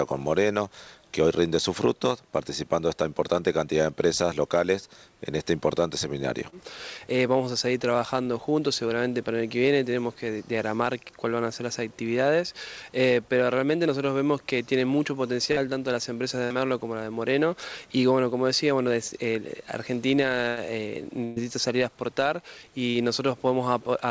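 Short concealed packet loss at 6.50 to 6.54 s and 15.52 to 15.58 s: about 20 ms and then about 40 ms of the stream failed to reach the decoder in time. The receiver bridged each hole by extending the preceding sound, pitched where it was voiced and as shaped noise where it wasn't, before easing back into real audio. Each gap is heard as a brief smear or wobble.

Burst of packet loss at 16.44 to 16.52 s, 20.48 to 20.58 s and 21.24 to 21.38 s: runs of roughly 60, 80 and 120 ms were lost or arrived too late to play. The decoder stretched the last sound across each run and faded it out, producing a held buzz or dying hiss. The audio then resumes further along, with the stretch in between gone.

A final short concealed packet loss at 22.90 to 22.96 s covers about 40 ms in the same smeared way. Throughout, the call path's coding leaves nothing above 8 kHz, which fits a wideband codec such as G.722 at 64 kbps.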